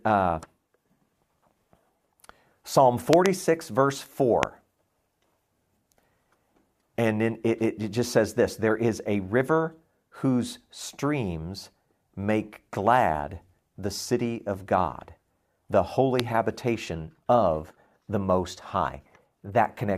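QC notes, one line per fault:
3.13–3.28 s, 4.43–4.45 s, 16.20–16.22 s: loud pop. A double pop first, then single pops, the last just before "habitation of the", peaking about 20–25 dB above the speech, which continues beneath. These are likely voltage spikes from a switch or static. They appear as tall narrow waveform spikes and thin full-band spectrogram lines.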